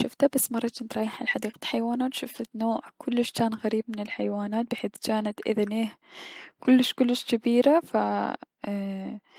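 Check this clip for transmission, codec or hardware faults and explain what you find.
Two brief transmission faults occur, both a lost packet rebuilt from error correction. At 2.71 to 2.77 s about 40 ms of speech turns rough and grainy, which fits two separate 20 ms frames. At 5.31 s one short frame does the same. In each case the following packet carried a low-bitrate backup copy, and the decoder played that instead of the missing data. Unlike concealment guesswork, there is no gap, buzzy repetition or fade, only a briefly coarser, noisier texture.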